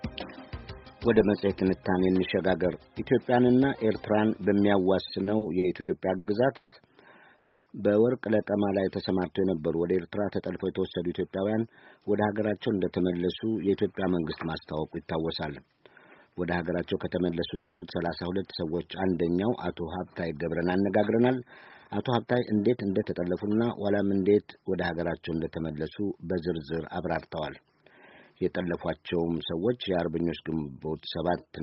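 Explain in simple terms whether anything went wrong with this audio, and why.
Several network-related faults are audible.

From 5.23 to 6.75 s there are repeated stalls (stutter). The audio catches six times, with the longest catch lasting 160 ms. About a quarter of that stretch is filled-in sound. Packets were arriving too slowly, so the receiver's buffer kept running dry. Each time, it stretched out the last bit of audio until new data arrived. Nothing is lost, but the sound drags and hiccups.

At 7.38 to 7.69 s and again at 17.55 to 17.85 s, the sound briefly hangs. Each hang lasts about 0.3 s, and the last sound is held rather than dropping to silence. This is a call audio freeze, likely caused by a short burst of delayed packets emptying the buffer. The receiver filled the wait with continued sound, then picked up exactly where it left off, adding about 0.28 s and 0.27 s of delay.

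From 10.30 to 12.24 s and from 20.48 to 23.37 s, the audio plays about 12% fast at unchanged pitch. This is a jitter buffer speed-up. After the delays, the buffer held too much audio, so the receiver trimmed many tiny slices to catch up. It removed roughly a fifth of a second in the first stretch and roughly 0.4 s in the second, which makes the sound feel hurried.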